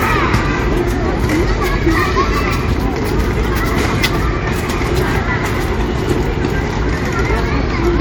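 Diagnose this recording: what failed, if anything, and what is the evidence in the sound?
Nothing stood out on listening to the recording, so there is no failure to trace to any stage of the chain.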